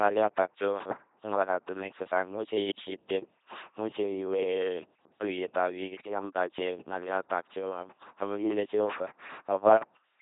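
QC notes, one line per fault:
Throughout: LPC-10 vocoder. The speech comes out as a buzzing, mechanical robot voice with no content above 3.8 kHz. Each moment is rebuilt from a ten-pole vocal tract filter fed either a pulse train or noise, at 2.4 kbit/s, so natural timbre is heavily lost.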